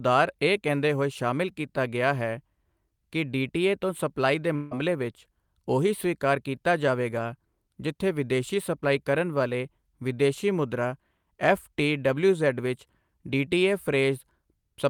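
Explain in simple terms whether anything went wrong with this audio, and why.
For about a fifth of a second, from 4.55 to 4.74 s, the sound likely stopped arriving over the network, which is a long network dropout. The receiving end covered the gap by stretching out the last bit of sound it had, so right after "ਡੀਟੀਏ ਤੋਂ ਸਪਲਾਈ ਦੇ" you hear a brief buzzy smear instead of silence. The audio then picks up at "ਵਿਚ ਓਹੀ ਸਵੀਕਾਰ ਕੀਤਾ", with the lost piece gone for good.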